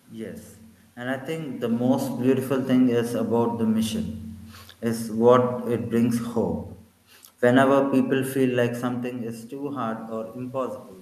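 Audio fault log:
No fault in this audio fault log.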